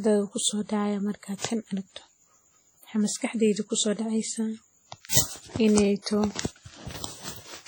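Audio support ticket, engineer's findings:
Washy, ringing speech throughout, with hiss that rises and falls with level; heavy damage. Likely WMA compression, which suggests a low bitrate of around 32 kbps. Long transform blocks smear quantisation noise over tens of milliseconds and zero weak components. Spectrogram: patchy, holed upper bands with energy blurred in time, and content running to about 20.1 kHz.

Pre-echo at 1.38–1.41 s (between "kusodacaya marki" and "tan aragto") and 5.09–5.13 s. Short hiss leads each attack, and the onset sounds soft. The codec block spreads noise sized for the loud attack across the quiet gap before it, about 37 ms. Waveform: low-level fuzz ahead of the transient. Spectrogram: faint broadband smear preceding the onset edge.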